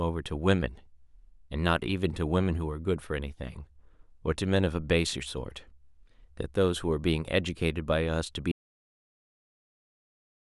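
At 8.52 s the speech cuts to an audio dropout to silence, dead silence with no room tone through the end, likely from input loss.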